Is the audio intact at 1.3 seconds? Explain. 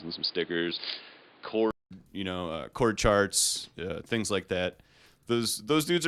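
No. From 0.0 to 1.91 s the speech sounds dull and boxy, with nothing above 5 kHz, a different level and its own background noise, then a 0.2 s silence before "you know uh chord". This is likely an input switched to a poorer device.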